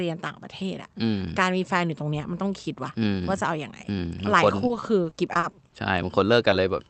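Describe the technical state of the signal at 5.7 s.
At 5.7 s the speech is near the end of a burst of repeated packet loss (robotic sound), running from 4.67 to 5.74 s. Eleven gaps, the longest 40 ms, are patched by extending the preceding sound, giving a choppy texture with pieces missing. On a spectrogram, smeared, repeated frames alternate with brief holes; the waveform shows stuttering, looped segments.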